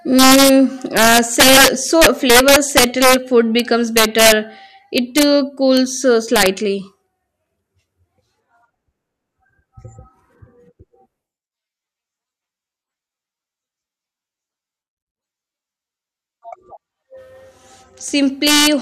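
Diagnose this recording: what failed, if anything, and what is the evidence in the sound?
Integer overflow at a fixed-point gain or sample-format conversion stage is breaking up the loud speech peaks. It cracks at 0.19–0.50 s, 0.97–3.14 s (worst, pushed about 7 dB over the limit), 3.59 s, 3.97–4.32 s, 4.98–5.23 s, 5.77 s, 6.36–6.47 s and 18.47–18.67 s. Peaks that should have been limited wrapped to the opposite sign. The waveform shows them jumping from one rail straight to the other, and the spectrogram shows full-band vertical streaks at each crack.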